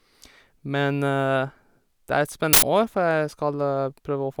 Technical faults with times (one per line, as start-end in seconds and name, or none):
2.53-2.62 uninitialised buffer